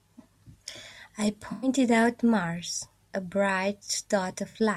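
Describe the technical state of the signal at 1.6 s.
At 1.6 s the decoder is running AAC frame loss with concealment, from 1.52 to 1.68 s. Roughly 107 ms of coded data, which fits a run of about five frames, never arrived, so the decoder rebuilt that stretch from the last good spectrum. The speech there comes out smeared and noisy, with a phasey wash in place of clean detail.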